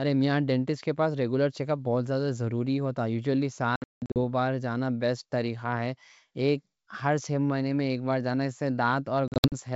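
From 3.76 to 4.19 s and again from 9.28 to 9.53 s, packet loss on an ADPCM call punches hard-edged silent gaps. The first burst holds 320 ms of loss scattered over 400 ms, with its longest gap 180 ms, and the second holds 160 ms of loss scattered over 240 ms, with its longest gap 60 ms. These gaps show as flat waveform stretches and blank spectrogram columns. After each gap the speech resumes briefly slightly distorted, because the decoder's predictor has lost step with the sender's.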